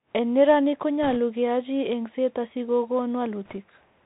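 From start to finish the speech is muffled and boxy, with nothing above 4 kHz, a granular hiss lying beneath it, and s sounds that come out scratchy and harsh. That is the Bluetooth CVSD headset codec, and its one-bit-per-sample delta coding fits a 64 kbps link. The coder only signals up or down against an adapting step, so loud, fast-changing high sounds outrun it and distort, and the narrow band cuts the top off everything.

Between 1.03 and 1.16 s a rushing, crackly noise washes over the speech without any sharp clicks. These are bit errors on a Bluetooth voice link, at a rate of a couple of percent. Flipped bits in a CVSD stream each nudge the waveform by only one step, whose size grows with the speech level, and the decoder's adaptation lets the damage fade, so the errors blur into a crackle instead of popping.

A second, lighter burst of the same crackle sits between 3.45 and 3.57 s. 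It comes from bit errors on the Bluetooth voice link again, this time at around one percent. With fewer flipped bits the rushing noise is thinner than in the first burst, since the crackle grows with the error rate. It stays soft-edged and free of loud clicks for the same reason: every CVSD bit carries equal weight.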